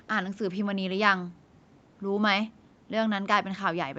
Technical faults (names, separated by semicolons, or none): none